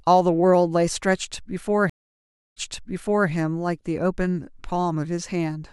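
A stream reconnect runs from 1.90 to 3.29 s. The speech drops into 0.64 s of silence as the connection fails and the player reopens it, starting a new decoder partway through the stream. When sound returns, it picks up about 0.76 s earlier than where it broke off, because the server resent a backlog of already-played audio. The listener hears a gap followed by a short stretch of the speech repeated.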